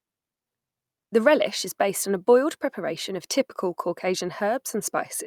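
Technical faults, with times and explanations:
No technical faults can be heard anywhere in the speech recording, and the signal stays steady and intact throughout.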